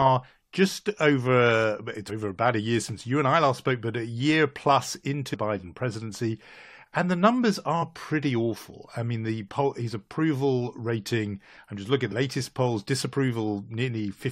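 Damaged data in the compressed stream surfaces four times in this speech: from 2.08 to 2.10 s, then at 5.33, 7.81 and 12.11 s. At each point part of the encoded stream is wrong, so the decoder misreads the affected frame, loses sync and hunts for the next valid frame header. What reaches the ear is a brief chirp or squawk lasting about 20 ms or less.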